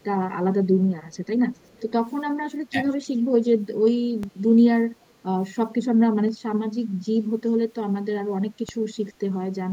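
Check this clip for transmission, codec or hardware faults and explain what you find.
Three kinds of fault are audible in this speech: a faint echo leak in four short places, one brief speech dip from double talk, and two DC steps.

Echo leak appears at 0.00 to 0.04 s, 1.09 to 1.17 s, 1.54 to 1.83 s and 5.04 to 5.13 s. A faint delayed copy of the speech trails the original by 416 ms, at about 40 dB below the speech, rising to about 35 dB below around 1.54 to 1.83 s. The likely cause is a loudspeaker on the far end whose echo canceller let some of its microphone pickup return. On a spectrogram it shows as weak harmonic smears repeating the speech pattern 416 ms later.

Speech suppressed in double talk occurs between 2.70 and 2.86 s. The speech level drops by around 15 dB for a little under a tenth of a second in total. This is likely an echo canceller that could not separate this talker from loudspeaker echo while both sides spoke, and so attenuated everything. 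On the waveform the envelope pinches inward abruptly, and the spectrogram briefly fades.

DC step occurs at 4.23 s and 8.69 s. Each time the waveform's zero line jumps suddenly, producing a low thump while the speech continues unchanged. The offset then drains away as though through a 20 Hz high-pass, so it does not hold. On the waveform the trace shifts off centre and curves back toward zero. On the spectrogram each step appears as a thin vertical stripe concentrated at the lowest frequencies.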